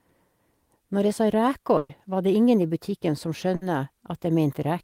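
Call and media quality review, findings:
Burst of packet loss, 1.77–1.91 s and 3.55–3.63 s: receiver concealment holds the last sound and fades it down, then skips ahead, dropping 120 ms and 60 ms of speech.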